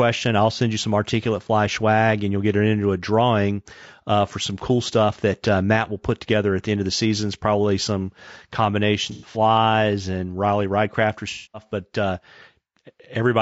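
Low-delay AAC compression, throughout: the speech sounds rough and grainy, with noise between the harmonics and a thin, synthetic top band. This is likely AAC-ELD, whose short frames resolve pitch poorly, at a rate that fits about 32 kbps.

AAC frame loss with concealment, 9.11 to 9.37 s and 11.30 to 11.66 s: the decoder patched missing frames from the last good spectrum. The first, 150 ms lost across 240 ms with the longest run about a tenth of a second, smears into noisy, phasey patches. The second, 240 ms just before "but uh", is a longer patched stretch.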